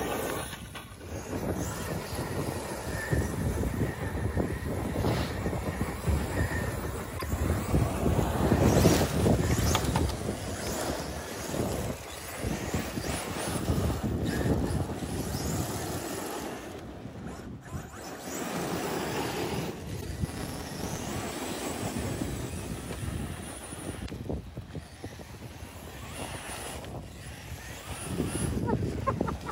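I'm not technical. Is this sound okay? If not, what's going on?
No. In three places, part of the compressed audio file was damaged, so the player misread that stretch and had to hunt for the next clean piece. This is damaged data in a compressed stream, heard as a brief glitch, such as a chirp, click or gap, at 7.15 to 7.23 seconds, 20.00 to 20.05 seconds and 24.02 to 24.10 seconds.

Separately, a processing step handling the audio in small chunks kept forgetting where it left off and restarted from silence on every block. This filter restarted on every block produces a buzz at about 345 Hz that rises and falls with the sound's level, which fits 128-sample blocks, from 20.25 to 21.06 seconds.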